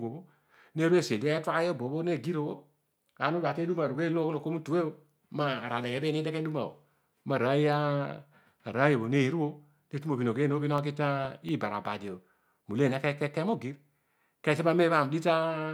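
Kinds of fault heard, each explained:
CD scratch ticks: A disc blemish destroys more data than error correction can rebuild, once per revolution. The player conceals or mutes the damaged samples. Here six ticks, each only a millisecond or two, recur about five times a second from 10.55 to 11.72 s.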